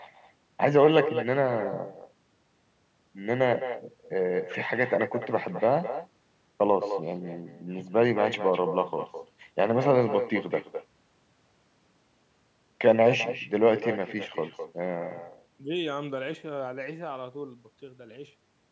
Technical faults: echo with no canceller

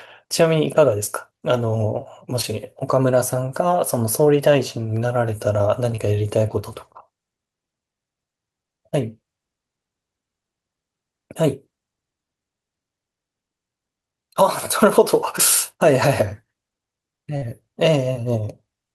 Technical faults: short concealed packet loss

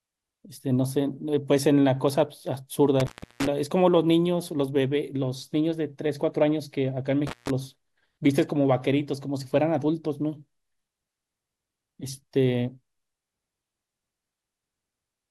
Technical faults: intermittent contact

